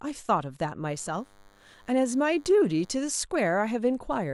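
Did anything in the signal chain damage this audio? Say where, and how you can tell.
Yes. From 0.91 s to 2.91 s a thin, steady buzz sits well below the speech. It is DECT cordless phone buzz picked up in the analogue wiring. A nearby DECT handset or base transmits a radio burst every 10 ms, and the audio circuitry rectifies it into a 100 Hz pulse train rich in harmonics. Mains hum would be smoother and tied to 50 or 60 Hz. It would also run throughout, whereas this buzz is confined to those two seconds.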